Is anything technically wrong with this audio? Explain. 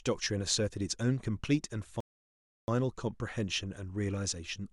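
Yes. A rebuffering stall occurs from 2.00 to 2.68 s: the player exhausted its downloaded speech and halted until more data arrived. The audio drops to silence for about 0.68 s, then resumes exactly where it stopped, with nothing lost but time added.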